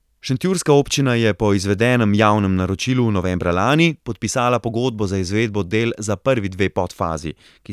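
Nothing in this speech recording stands out as a technical fault; there's no dropout, glitch or distortion anywhere to point to at any moment.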